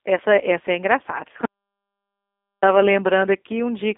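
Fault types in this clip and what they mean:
G.729 codec: The speech is rebuilt from a vocal tract model and pulse excitation, which fits an 8 kbit/s VoIP codec, giving a plainly rough, synthetic edge. The band runs from 250 Hz to 3.6 kHz with nothing above it. Plain band-limiting would cut the same range but keep a natural texture.
audio dropout to silence: From 1.45 to 2.62 s the sound stops dead for about 1.17 s, then resumes mid-flow. The gap is silent with no room tone, unlike a noise gate or fade, and likely comes from the input signal being lost.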